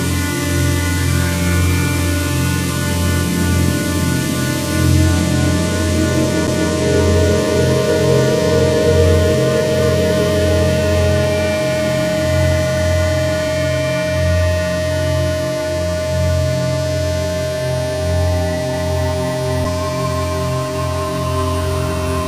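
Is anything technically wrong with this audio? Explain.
Yes. At 6.47 s and again at 19.64 s there is a tick with a mute lasting only a few milliseconds, after which the audio resumes from a different place. These are CD skips: the laser jumped to another turn of the disc's spiral.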